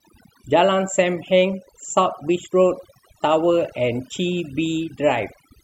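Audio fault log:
Throughout: overdone noise removal. Aggressive noise reduction gates bands near the noise floor, leaving twinkling specks in near-silent gaps and taking quiet parts of the speech with them.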